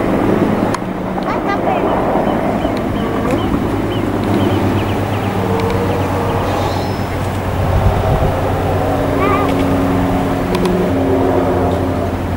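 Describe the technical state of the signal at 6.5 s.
A second copy of the audio is likely being picked up through a slower path, producing a doubled audio track from 4.28 to 10.90 s. At 6.5 s, an equally loud, full-band duplicate trails about a tenth of a second behind, giving a dry, flat echo with no room decay.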